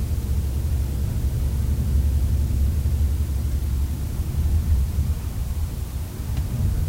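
From start to finish, the audio carries low bit depth with dither. The signal is held at only 6 bits, and noise was mixed in before each sample was rounded, so the rounding error becomes a steady random hiss instead of harsh distortion. That hiss sits roughly 25 dB below the sound and never changes. On a spectrogram it shows as an even wash across every frequency for the whole clip; the waveform looks thickened by a constant fuzzy band.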